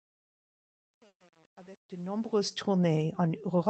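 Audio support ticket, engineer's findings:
Truncation distortion on fade-in, 0.0 to 2.53 s, worst until 2.32 s: gritty low-level sound. Fade or gain stage truncating without dither, consistent with an 8-bit path. Waveform shows staircase steps; spectrogram shows broadband grit.

Call audio freeze, 1.07 to 1.22 s: last sound stretched into a decaying buzz or hiss, then about 80 ms of silence, then playback resumes with nothing lost. Likely a jitter buffer underrun from delayed packets, adding about 130 ms of delay. Spectrogram shows a smeared band, then a blank gap.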